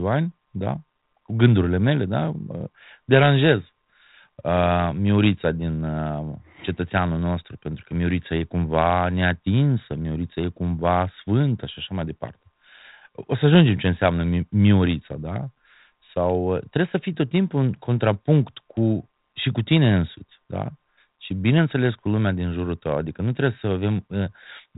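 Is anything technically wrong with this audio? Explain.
No, nothing in this speech recording stands out as a technical fault. It has passed through G.726 ADPCM at 32 kbit/s, the rate DECT cordless phones use, so the sound is held to the telephone band below 4 kHz and carries only the light coding texture expected at that rate.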